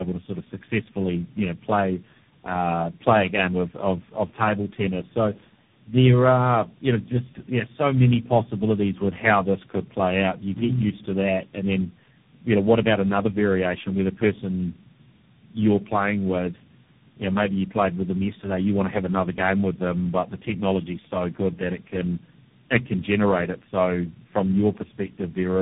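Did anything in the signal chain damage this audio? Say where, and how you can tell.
Yes. There is tandem speech coding at the codec stage, throughout the whole clip. The speech is rough, muffled and warbly, with nothing above 3.8 kHz. The roughness is heavier than a single narrowband coder would produce, which points to about three speech codecs in a row, plausibly ending in a CVSD stage. At each link border the speech was decoded and coded again, so every coder added its own distortion on top of the previous one's.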